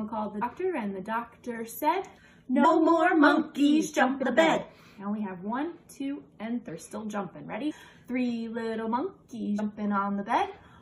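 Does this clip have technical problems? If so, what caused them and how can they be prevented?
Yes. Compressed frames are skipped at 0.41, 2.64, 4.22, 6.68–6.70, 7.70–7.72 and 9.58 s. Each time the audio jumps ahead, losing between about a tenth and a third of a second. The joins are smeared blips, not clicks, which fits lost frames of roughly 23 ms. Prevent this with intact files and verified, error-protected transfer.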